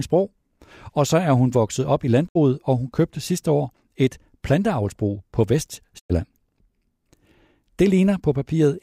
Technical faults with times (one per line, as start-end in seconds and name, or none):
2.27-2.37 digital broadcast dropout
5.98-6.11 digital broadcast dropout